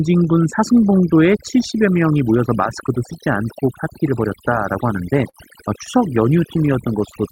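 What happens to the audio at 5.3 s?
A short stall from a late packet occurs between 5.29 and 5.37 s. A packet missed its playout time, so the jitter buffer ran dry, and the receiver stretched the last bit of sound by about 41 ms until the packet arrived. It then resumed from the same point, so no speech is lost, but that sound is held slightly too long, with a faint buzz or dip, and everything after it plays 41 ms later.

Overdone noise removal also affects this moment, as it does the whole clip. The noise reduction is set too aggressively, pushing individual frequency bands down or out whenever they come near its noise estimate, and it takes the quieter parts of the voice along with the noise. Around the stall, the background is pushed down and breaks up into twinkling specks.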